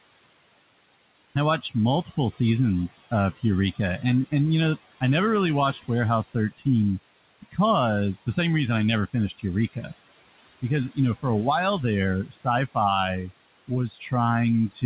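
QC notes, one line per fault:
Throughout, noise suppressor artifacts: the suppressor pulls what it judges to be steady noise down by about 20 dB, frame by frame, so the room background, sitting about 14 dB under the speech, sinks in pauses and resurfaces beneath each phrase. On a spectrogram the noise floor turns patchy and speckled, with bands flicking on and off, all below the 4 kHz ceiling of the narrowband call path.
1.61–4.32, 5.73–6.66, 7.42–7.58, 9.13–9.92, 10.62–11.25 and 12.25–14.12 s, speech cut by the noise suppressor: within each span the suppressor mistakes parts of the speech for noise and turns them down by about 16 to 19 dB, so soft consonants and word endings sound swallowed. The cuts are brief, from roughly a tenth of a second up to about half a second per span. On a spectrogram these show as holes in faint high-frequency consonant energy. On the waveform, syllable tails collapse early.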